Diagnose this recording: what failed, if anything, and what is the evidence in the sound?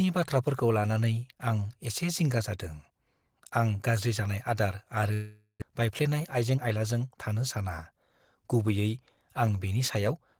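Network stage. A long network dropout runs from 5.13 to 5.72 s. The sound stretches into a fading buzz, then briefly goes silent. Lost packets are the likely cause.

Jitter buffer speed-up follows at 6.20 to 6.76 s. The speech runs 9% fast at unchanged pitch. The buffer trimmed pitch periods totalling about 70 ms to cut the delay.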